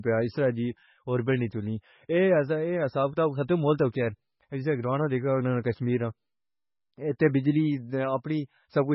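Speech, with heavy MP3 compression damage all the way through: nothing comes through above 5.6 kHz, and the whole thing sounds bit-starved, likely from an encoder running at a very low bitrate, around 16 kbps, throwing away weaker frequency content to get by.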